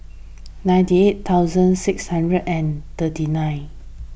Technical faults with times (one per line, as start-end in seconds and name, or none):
none